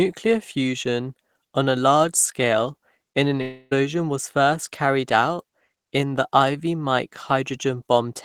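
Speech, with a long network dropout from 3.41 to 3.73 s, after "large scale in an". The audio stops arriving and the receiver carries the last sound on as a fading buzz for about 0.3 s. It resumes at "was first carried out", with the lost stretch gone, likely from packet loss.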